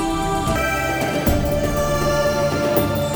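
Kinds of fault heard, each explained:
Audio read two samples at a time (double speed): from about 0.56 s to the end, the reader treats each pair of samples as one frame, so the sound runs twice as fast and a full octave higher. Skipping every other sample without filtering folds high frequencies back down. A time-stretch fault would keep the pitch.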